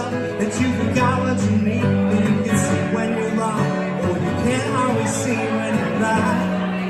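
Nothing technical stands out here; the audio simply runs its course with no problems worth flagging.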